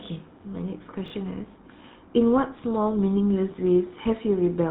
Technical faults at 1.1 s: GSM full-rate codec; chunks out of order

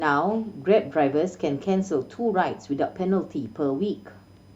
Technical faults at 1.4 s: USB whine

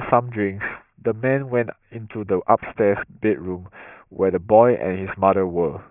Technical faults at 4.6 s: aliasing

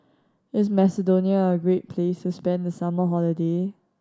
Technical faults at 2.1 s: none

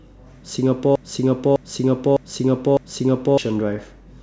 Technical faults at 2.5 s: broken-record loop

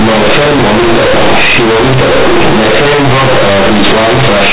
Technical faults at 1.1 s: companded audio read as linear

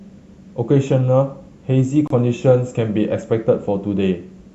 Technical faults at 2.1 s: gap at a join of encoded pieces

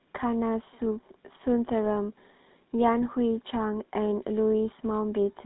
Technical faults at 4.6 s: GSM full-rate codec

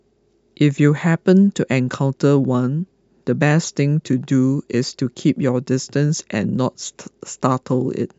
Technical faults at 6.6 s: none

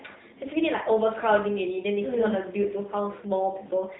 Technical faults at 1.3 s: AMR narrowband mobile codec

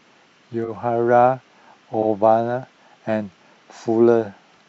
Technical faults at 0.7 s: repeated frames

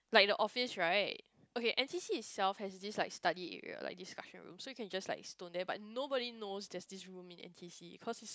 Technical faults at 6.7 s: none

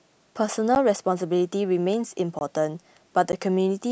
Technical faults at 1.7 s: none

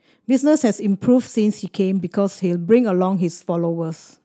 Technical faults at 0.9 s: lost packet rebuilt from error correction

